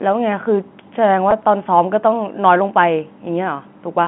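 At 1.31 s the speech briefly holds and buzzes, a tiny frozen stretch where the last bit of tone seems to repeat before the talker carries on. This is packet loss with pitch repetition: about 10 ms of audio went missing, which fits a single lost packet, and the receiver filled the hole by replaying the most recent pitch period. The gap is short enough that there's no fade to silence, just that brief buzzy stutter, heard against the narrow 150 Hz to 3.4 kHz band of the G.711 telephone line.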